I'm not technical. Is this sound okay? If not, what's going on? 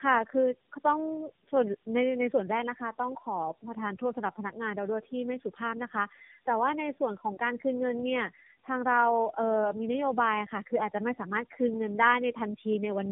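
No. Throughout, the speech has tandem speech coding: it passed through three phone-network speech codecs in a row, leaving it rough, warbly and muffled, with nothing above 3.5 kHz.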